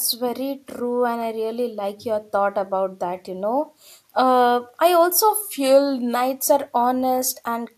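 Speech, with a drift correction step from 5.42 to 6.15 s: speed drops 6.1% and pitch falls 109 cents together, then snaps back. That is likely a clock-matching rate change, unlike wow's gradual, recurring wobble.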